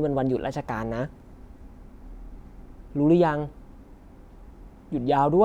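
No technical faults can be heard anywhere in the recording, and the speech signal comes through with its level, timing and frequency content intact.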